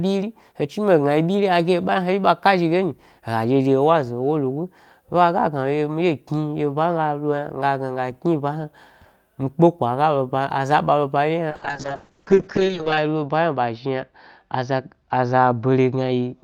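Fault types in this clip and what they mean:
Call bitrate drop: from 11.51 s to the end the speech turns rough and watery, with the top end gone above about 8 kHz. The encoder was pushed from 32 kbps down to 6 kbps, sitting at the lowest rate for 1.48 s, so it coded everything coarsely and narrowed the bandwidth.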